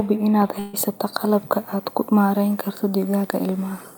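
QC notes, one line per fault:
0.59–0.75 s, burst of packet loss. Several consecutive packets go missing. The receiver stretches the last sound for about 136 ms, fading it down as the gap goes on. Playback then resumes at "qalabka aad ku maarayn", with about 140 ms of speech gone.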